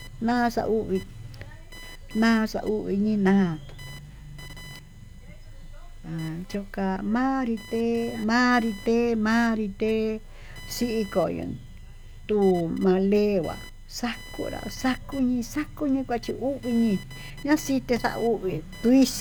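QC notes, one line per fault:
Throughout: computer activity noise, a buzzing whine pitched around 1 kHz sitting roughly 25 dB under the speech, rising and falling with what the computer is doing rather than with the talker. Processor, graphics or mouse load swings the ground the audio circuit shares, and that current leaks into the signal. Unlike steady mains hum at 50 or 60 Hz and its harmonics, this tone is higher and keeps changing with machine activity.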